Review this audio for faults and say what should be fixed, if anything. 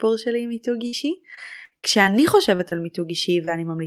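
A burst of packet loss hits at 0.87 to 0.95 s. About 60 ms of the speech never arrives. The receiver covers the hole by extending the last sound for roughly 53 ms and fading it down. A voiced sound turns into a brief held buzz. An unvoiced one becomes a dying hiss. The speech then resumes slightly further on, and the missing piece is simply gone.

Repeated packet loss, heard as robotic sound, runs from 1.35 to 2.07 s. Packets drop out four separate times in this stretch. The longest gap is 59 ms, and about 140 ms of speech is lost in total. Each gap is patched by continuing the previous sound, so roughly a fifth of this span is filler. The patches come close together. The result is choppy, with a robotic edge.

Short concealed packet loss occurs three times: at 2.55 to 2.61 s, 2.69 to 2.73 s and 3.45 to 3.49 s. The first loses about 40 ms. The other two lose about 20 ms each. Each hole is filled by extending the preceding sound and then blending back into the real audio. 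These are heard as brief smears or small wobbles. A short consonant can drop out entirely.

To prevent this, fix the network path causing the losses, and use a larger jitter buffer plus forward error correction so lost or late packets can be recovered.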